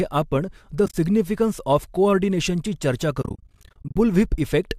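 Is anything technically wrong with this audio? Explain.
Yes. The clip has AAC frame loss with muting. Frames of the compressed stream went missing and the decoder zeroed their spectrum, so the overlapping windows fade the sound down and back up around each hole. Just after "आपण द", from 0.86 to 0.94 s, about 60 ms drops out in short soft-edged gaps. After "ऑफ कोऑर्डिनेशनची चर्चा", from 3.22 to 3.96 s, roughly 430 ms vanishes in a stutter of brief holes, none much over 40 ms, which points to dozens of 10 ms frames lost. The light graininess in the speech is likely from low-delay AAC-ELD compression.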